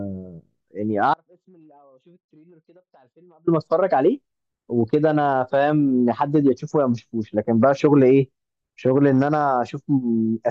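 From 1.14 to 3.47 s the speech drops out abruptly, leaving only a faint residue. That residue sits roughly 35 dB down for about 2.33 s, likely a broken connection feeding a still-live path. The waveform collapses to a thin band, and the spectrogram goes nearly blank between hard vertical edges.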